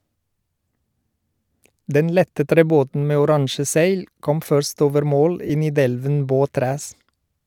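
A speech clip with lost LE Audio frames at 5.47 to 5.50 s, right after "kom først over mål". About 22.5 ms of Bluetooth audio went missing, which fits three lost frames. The LC3 decoder filled the gap by replaying the last spectrum with randomised signs, leaving a short, noisy smear.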